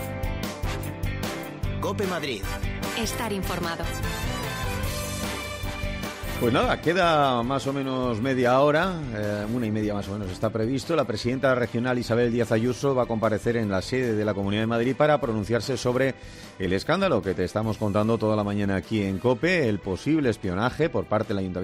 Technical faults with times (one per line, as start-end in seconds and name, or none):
none